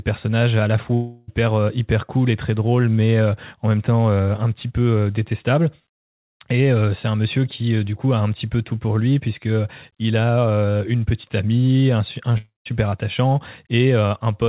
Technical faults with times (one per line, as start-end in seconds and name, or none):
0.94-1.30 long network dropout
12.38-12.67 long network dropout